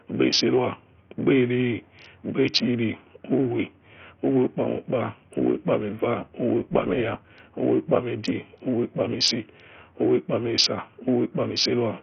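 A speech recording with a dull, gritty sound all the way through. The treble drops out, and heavy grit and quantisation damage point to a starved bitrate, likely Bluetooth SBC compression at around 48 kbps. From 6.6 to 7.4 s, just before "uwe ukpami edie uwe", there's a metallic buzz. That's overlap-add ripple: frames rejoined with uneven gain make the level swing about 6 dB, around 200 times a second.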